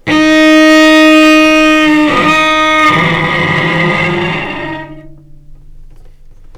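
Hard clipping runs through the whole clip. The sounds were driven about 6 dB past what one stage could pass, so the loudest peaks are sliced flat. Only a small share of the waveform, around four percent, hits the ceiling. Those flat tops add harsh high harmonics, heard as crackle on the louder moments.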